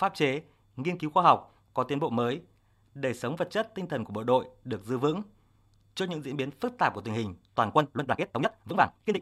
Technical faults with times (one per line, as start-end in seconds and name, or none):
7.72-9.21 time-stretched section
7.98 damaged data in a compressed stream